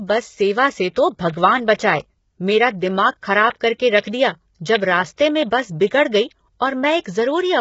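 Throughout, the speech sounds rough and grainy, with nothing above 7.7 kHz. This is likely low-delay AAC compression, consistent with heavily damaged AAC-ELD around 16 kbps.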